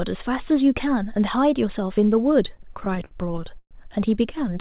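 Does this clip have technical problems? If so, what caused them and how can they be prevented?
Yes. Between 2.48 and 3.73 s this speech clip has repeated stalls (stutter). The sound catches and drags seventeen times. Each pause is filled by stretching the last sound, and the longest runs to 121 ms. About 330 ms is filled in all, roughly a quarter of that stretch. No speech is lost. Packets arrived late, so the jitter buffer kept running dry and the receiver had to wait. The audio also stops at 4 kHz, which fits a narrowband call codec. A steadier network path, or a larger adaptive jitter buffer, would prevent it.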